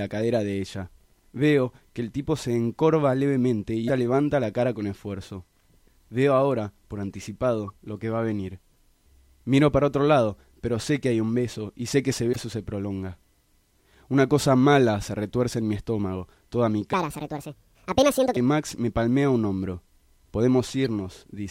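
Damaged data in a compressed stream appears at 3.85 to 3.90 s, 7.67 to 7.70 s and 12.33 to 12.36 s. Corrupted bytes make the decoder misread frames and lose sync while it hunts for the next header, giving brief chirps or blips.

A section at the wrong speed runs from 16.93 to 18.37 s. The sound plays 1.61 times too fast and rises about seven semitones, high and hurried, likely from being fitted to the wrong clock.

The same stream damage returns as a short blip at 20.84 s.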